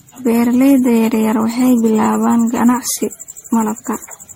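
Speech throughout with generation loss: the sound is swirly, smeared and hollow, consonant attacks blur, and nothing reaches above 16.5 kHz. It is likely the result of repeated MP3 decoding and re-encoding, around fifteen passes at a rate near 61 kbit/s.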